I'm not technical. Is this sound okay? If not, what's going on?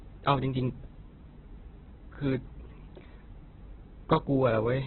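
No. The speech sounds muffled, rough and grainy from start to finish, with nothing above 4.2 kHz. That is likely heavy Opus compression.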